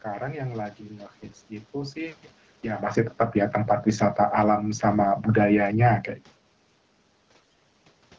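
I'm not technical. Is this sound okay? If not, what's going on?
No. At 1.22 to 1.38 seconds, and again more strongly at 7.31 to 7.59 seconds, the voice turns hoarse and gargly. These are AMR bit errors: a weak phone connection scrambled part of the coded sound. Unlike a dropout, the voice never goes silent and keeps its pitch and loudness.

From 2.88 to 6.0 seconds there is automatic gain falling. The phone decided the sound was too loud or too noisy and slowly turned it down, so the voice and the background noise sink together. When someone just leans away, as happens around 2.5 seconds, only the voice changes and the background stays the same.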